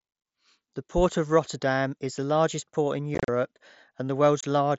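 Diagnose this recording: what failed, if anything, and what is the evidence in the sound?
Unconcealed Bluetooth headset packet loss on the headset-to-phone radio link. From 3.15 to 3.28 s, after "the largest port in", speech breaks into hard-edged holes (longest 37.5 ms). A 22.5 ms hole follows at 4.41 s. Lost mSBC packets were replaced with silence or an idle pattern, not concealed.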